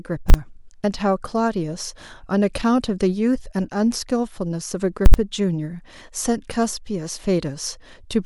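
At 0.30 s and again at 5.06 s, the speech is hit by invalid numbers at full scale. A calculation produced infinite or invalid values, which were pinned to maximum level. The 40 ms and 80 ms blocks each sound like one violent bang.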